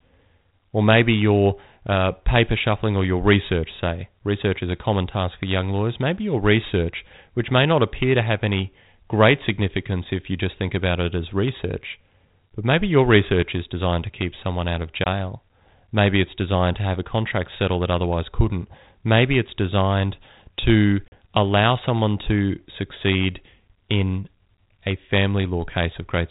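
A speech recording over a band-limited G.726 ADPCM telephone path, with light codec hiss that fits the 32 kbit/s DECT rate, suffers packet loss on an ADPCM call twice. The decoder's adaptive predictor and step size lose step with the sender. Hard-edged silent holes follow "keep someone out of" at 15.04–15.07 s (20 ms lost, about one packet) and "it's designed to" at 21.08–21.15 s (40 ms, about two packets), before "allow someone to succeed". The speech then resumes slightly distorted before settling.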